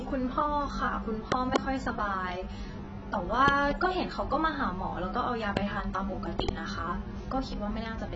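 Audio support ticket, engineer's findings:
AAC compression, whole clip: likely encoded as AAC-LC at a very low bitrate, around 16 kbps, with heavy quantisation. Band-limited to 8 kHz, so the speech sounds dull and smeared, with a warbling, fizzy texture on sustained sounds and sibilants.

Loud pops: likely voltage transients, from a connector, switch, static or driver glitch, added onto the line. Double pops at 1.32–1.58 s, 3.48–3.73 s and 6.40–6.51 s, a single pop at 5.57–5.59 s. Sharp thumps, about 20–25 dB above the speech, which continues underneath.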